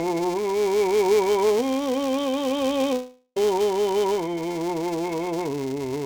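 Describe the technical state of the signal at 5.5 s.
At 5.5 s the music carries a filter restarted on every block, present throughout the clip: the filter starts each block from silence, leaving a small transient that repeats as a 345 Hz buzz, which fits a 128-sample block. Unlike steady mains hum, this buzz rises and falls with the music's level.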